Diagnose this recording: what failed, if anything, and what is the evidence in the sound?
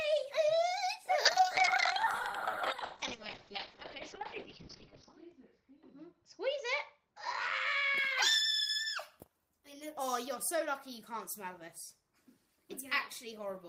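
Call bitrate drop, 1.26 to 8.03 s. The starved encoder cuts highs above 6 kHz and codes coarsely. It sounds rough, fitting roughly 7 kbps.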